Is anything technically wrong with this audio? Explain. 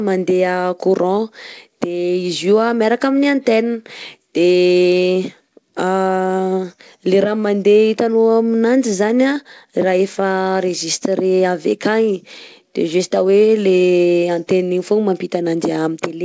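Yes. This speech has clock drift between sender and receiver throughout. The sender's clock runs about 2% slow. The jitter buffer keeps draining, so the receiver must fill gaps. Small timing hiccups recur at uneven intervals across the whole clip.

Repeated timing corrections run from 0.08 s to 15.74 s. To stay in step, the receiver repeats short pieces of audio. Playback effectively runs at 98% speed, stretched by roughly 400 ms in total. The edits are small, heard if at all as slight stutters or an unsteady tempo. The G.722 call path leaves nothing above 8 kHz.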